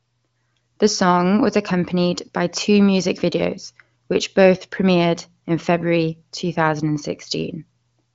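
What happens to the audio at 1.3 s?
Nothing goes wrong at 1.3 s: the speech carries on intact through that moment, with the wideband HD Voice coding leaving no audible damage.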